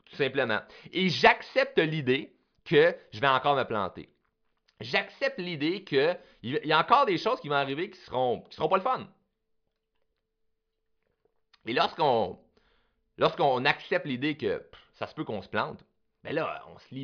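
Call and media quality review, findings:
No faults found in review.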